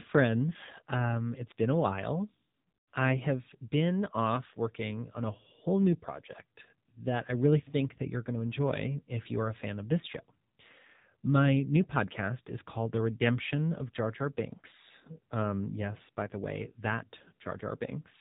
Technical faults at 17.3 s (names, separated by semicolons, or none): AMR narrowband mobile codec